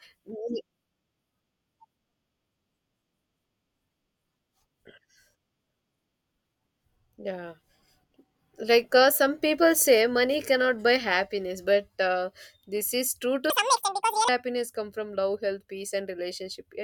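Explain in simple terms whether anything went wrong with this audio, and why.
Something did go wrong, near the end. From 13.5 to 14.29 s, just before "happiness come", there is a section at the wrong speed: the speech runs almost twice as fast (1.93 times) and jumps roughly ten semitones higher, so it sounds squeaky and rushed. The likely cause is that this part was played against the wrong clock. Because the pitch and the pace change together, this is a speed fault rather than a pitch-shifting fault, which would alter the pitch while leaving the pace unchanged.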